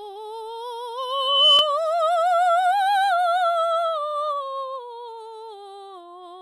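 A music clip with two kinds of fault. The first is a loudspeaker feedback squeal from 0.98 to 1.73 s. A steady tone at 3 kHz rises out of the music, builds over about half a second, and ends up roughly 10 dB louder than the music. This happens when a microphone picks up the loudspeaker it feeds. At 3 kHz the loop gain exceeds one, so that frequency keeps growing until the loop is broken. The second is overlapping chunks, heard as brief stutters from 1.59 to 1.61 s and from 4.11 to 4.14 s. At each point about 25 ms of audio plays twice. The joins are 2.5 s apart. That spacing fits audio handled in 2.5 s chunks, where each chunk starts 25 ms before the previous one ends. The first stutter falls inside the squeal.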